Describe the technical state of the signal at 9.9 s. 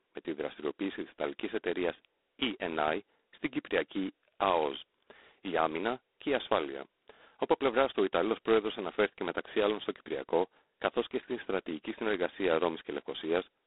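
G.726 ADPCM at 16 kbit/s, present throughout the clip including 9.9 s, codes only two bits of prediction error per sample. This heavy quantisation gives the speech a harsh, rasping hiss that rises and falls with its level. The sound is also confined to a 250 Hz to 3.6 kHz line band, with nothing above 3.8 kHz.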